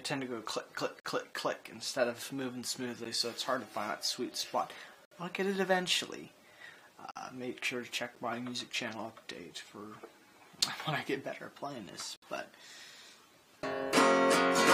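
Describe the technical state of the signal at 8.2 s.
A gap between stream segments occurs at 8.15 s. Two consecutive segments' timestamps leave a small hole, which fits 1-second segments, and the player fills it with about 9.5 ms of silence. It is heard as a brief hard-edged dropout, with no audio actually lost.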